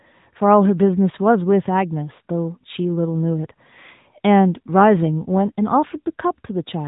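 Throughout, AMR narrowband mobile codec: nothing above 3.8 kHz passes, and its pulse-driven vocal-tract model sounds plainly buzzy and synthetic, fitting a 10.2 kbps mode.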